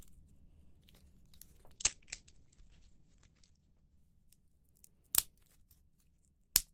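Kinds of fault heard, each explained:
Call bitrate drop: The call's bandwidth estimate fell, so the encoder coded with far fewer bits. From 1.76 to 5.81 s the sound turns rough and watery. Highs above 8 kHz vanish. The coarsest stretch lasts about two seconds, which fits roughly 11 kbps.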